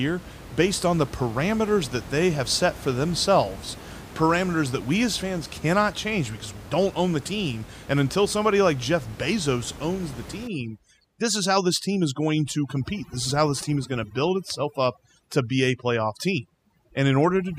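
From 10.47 s to the end, after "owns the", overdone noise removal cuts bands near the noise estimate, so the background drops and breaks up into twinkling specks. Codec warble, by contrast, leaves the room noise in place.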